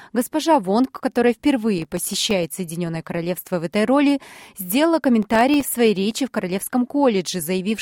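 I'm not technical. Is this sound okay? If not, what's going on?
No, there's processor overload crackle from about 1.78 to 2.32 s and again from 5.23 to 6.11 s: the computer repeatedly missed tiny deadlines, leaving little silent gaps that sound gritty.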